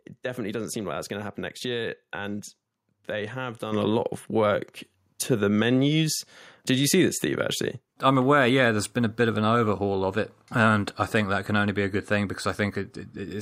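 At 3.72 s the microphone volume stepped up by about 7 dB in one jump, as the call software raised input gain, lifting speech and background together.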